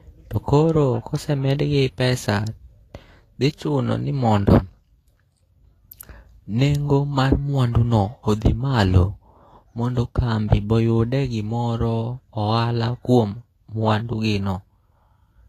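From start to finish the speech sounds hissy and grainy, with roughened tones and softened consonant attacks, likely from Vorbis compression at a rate that fits about 32 kbps. A spectrogram shows nothing above 14.2 kHz and a speckled, noise-like upper band.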